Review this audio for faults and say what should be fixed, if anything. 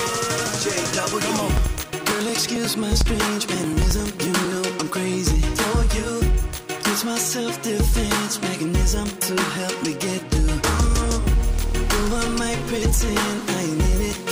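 Periodic USB or driver dropouts run from 0.94 to 4.45 s, with about 10 ms skipped every 0.09 s. The strict, even spacing separates them from random clicks. To prevent it, stop background tasks from blocking the USB bus or audio driver, for example by updating the driver or giving the interface its own port.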